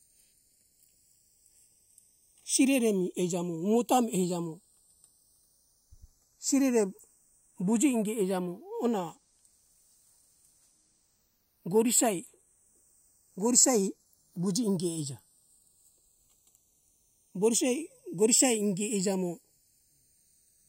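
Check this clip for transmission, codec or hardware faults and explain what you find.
One fault runs through the whole speech clip. A slow flanging sweep drifts across it: channels drifting apart, as two unsynchronised clocks, tens of ppm off, slide the inter-channel delay toward half a millisecond, sweeping mono comb notches.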